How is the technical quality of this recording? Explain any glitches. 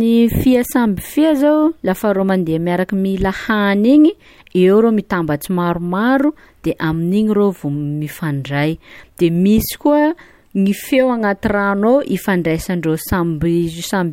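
Nothing stood out as a technical problem on listening to this speech recording.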